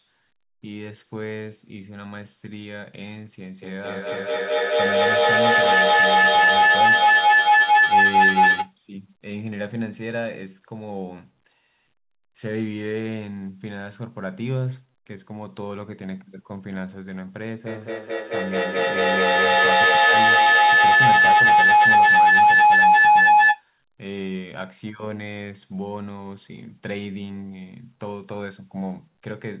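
Speech that, from 3.62 to 8.78 s, returns again and again at roughly a fifth-of-a-second spacing, each repeat thinner and more ringing, piling up to about 15 dB above the talker. That is feedback echo between two devices. A second device on the same call replays this microphone's signal, which is picked up again, and neither echo canceller removes sound from the other device. From 17.66 to 23.68 s the loop turns into feedback howl, a tone near 1 kHz, with the loop coming round about every fifth of a second, that swells to about 15 dB above the speech. Here the microphone-to-loudspeaker loop gains level on each pass, narrowing to the frequency the room and devices favour.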